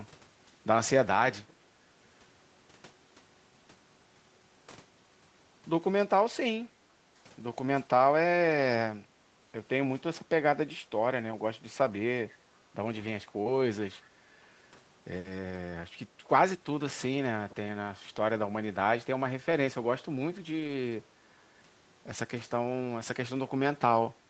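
At 6.65 to 6.78 s the room background dips by about 10 dB for roughly a sixth of a second, then comes back. This is background gated by the echo canceller: with the loudspeaker active, it clamped the microphone hard and released it moments later.

Around 11.31 to 11.33 s the speech turns briefly rougher and noisier for 20 ms, with no gap. That is a lost packet rebuilt from error correction: the Opus decoder played the low-bitrate copy carried in the following packet in place of the missing one.

At 13.43 to 13.47 s there is a short smear where 20 ms of audio never arrived. This is short concealed packet loss: the receiver extended the preceding sound to bridge the hole and blended back. Within that stretch, at 13.45 s, another lost packet was rebuilt from error correction, adding a moment of grainier texture.

At 14.01 to 14.08 s a very faint, delayed ghost of the speech surfaces, trailing the original by 489 ms. 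This is an echo leak, likely from a loudspeaker on one side whose echo canceller let a scrap of the picked-up voice slip back into the call.

At 19.51 s one more 20 ms packet was lost and rebuilt from error correction, giving a brief coarse patch. From 20.59 to 20.69 s three separate packets were rebuilt this way, so 60 ms of speech sounds rougher and noisier while staying continuous.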